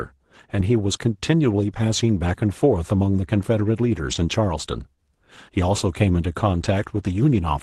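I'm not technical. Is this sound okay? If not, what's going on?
No. At 4.11 to 4.17 s there is a lost packet rebuilt from error correction. About 40 ms sounds briefly rougher and noisier, which fits two lost packets.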